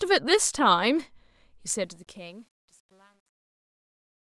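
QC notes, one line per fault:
1.70–4.25 s, truncation distortion on a fade: as the speech fades out toward the end of the clip, the gain stage drops the low-order bits without dither, so each shrinking waveform is forced onto a few coarse quantisation steps, which fits a path only about 10 bits deep. The quiet tail turns gritty, worst from about 2.23 s to the end.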